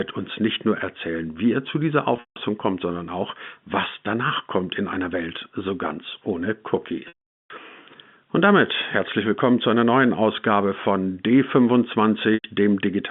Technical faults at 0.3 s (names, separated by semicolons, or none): none